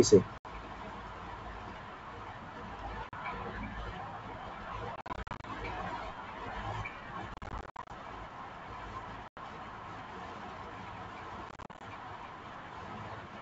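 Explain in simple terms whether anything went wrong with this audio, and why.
Packet loss on an ADPCM call breaks up the speech in several places. Short, hard-edged holes of silence appear at 0.38, 3.09 and 9.28 s. Longer patches, where many small gaps cluster together, run from 4.96 to 5.45 s, 7.34 to 7.91 s and 11.49 to 11.82 s. A plain dropout ends cleanly. Here the sound returns with a click, some distortion or the wrong loudness, because the decoder lost track of the sender during the gap and needs some tens of milliseconds to settle.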